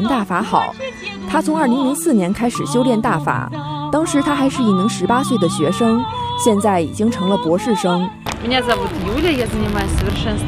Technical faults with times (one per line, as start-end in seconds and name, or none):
8.68-10.18 buffer tearing